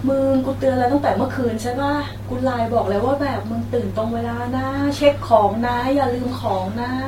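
No technical faults can be heard anywhere in the recording.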